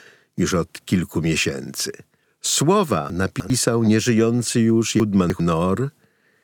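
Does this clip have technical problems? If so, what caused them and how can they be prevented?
Yes. Chunks out of order: a 100 ms chunk was played three chunks late at 3.1–3.5 s, just before "nieżyjący już", and again at 5.0–5.4 s, just after "nieżyjący już". Each time the sound briefly jumbles at the hard joins. Buffering incoming chunks and writing them out strictly by sequence number prevents this.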